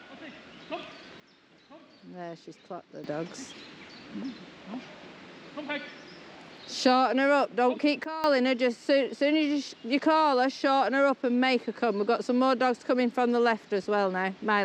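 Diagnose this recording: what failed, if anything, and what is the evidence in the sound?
A sudden gain jump cuts the level by about 12 dB from 1.20 to 3.04 s and from 8.04 to 8.24 s, with sound and noise floor falling together. The waveform steps abruptly, and the spectrogram darkens evenly across all frequencies. The likely cause is an unramped digital gain change at the driver or processing stage.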